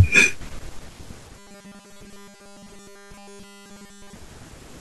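From 1.37 s to 4.15 s, the audio path was likely starved of fresh data, so the playback software kept refilling the gap by looping the last tiny buffer instead of waiting for new audio. Essentially all of that stretch is made of repeats, and a repeat rate of 200 Hz points to a buffer of about 5 ms. The result is robotic sound from repeated short buffers: the speech becomes a rigid, metallic 200 Hz buzz that only loosely tracks the talking.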